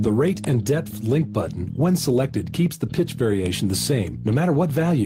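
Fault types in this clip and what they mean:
No fault types can be heard in this clip.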